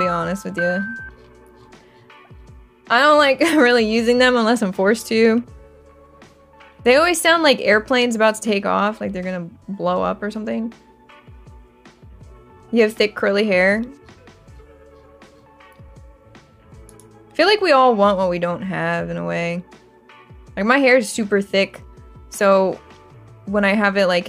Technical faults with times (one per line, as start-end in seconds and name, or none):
15.88 overlap between stream segments